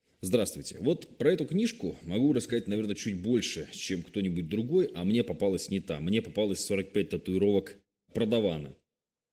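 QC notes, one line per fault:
No faults were found in this speech clip. The Opus voice compression keeps the full audio band with light coding texture, which fits a hybrid-mode stream at around 20 kbps.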